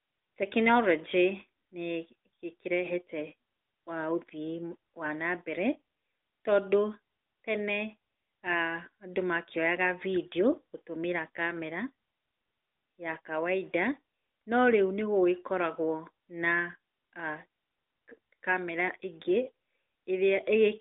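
No faults found: the speech runs through a normal AMR-NB mobile channel at 12.2 kbps, band-limited to roughly 250 Hz to 3.7 kHz, with only the light coding texture expected at that rate.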